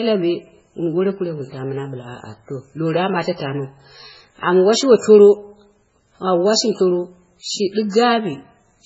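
From start to finish the speech carries heavy MP3 compression damage, likely from a very low bitrate, something around 16 kbps. Nothing survives above about 7.6 kHz, so it sounds dull, and the thin, starved encoding leaves a watery, swirly texture with smeared attacks.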